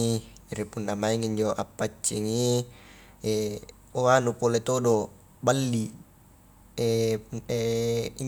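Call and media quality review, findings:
No faults found on review of the speech recording. Nothing heard warrants follow-up on any component in the chain.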